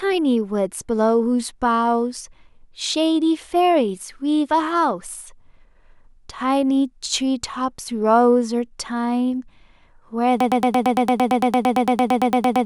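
At 10.40 s the speech locks into a broken-record loop that runs to the end of the clip. A fragment about 0.11 s long repeats exactly, back to back, 20 times, giving a rapid mechanical stutter at roughly nine cycles per second, and the speech that should follow is lost. The likely cause is a player or stream that stalled and kept resending its last buffered piece. On a spectrogram this appears as identical narrow blocks tiling side by side; the waveform shows the same shape stamped out every 0.11 s.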